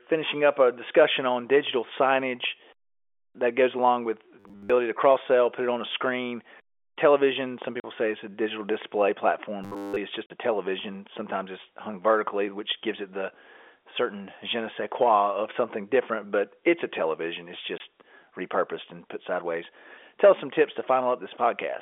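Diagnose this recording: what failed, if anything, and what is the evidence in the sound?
Robotic sound from repeated short buffers at 4.40–4.71 s, after "that goes along with", and 9.64–9.97 s. A rigid 100 Hz buzz points to a driver or buffer stage likely replaying a 10 ms block.

Packet loss filled with silence, a network fault: 40 ms gaps at 7.80 s before "say it's a digital" and 10.26 s before "a television", plus 20 ms at 17.78 s. Their hard-edged gaps fit whole 20 ms packets.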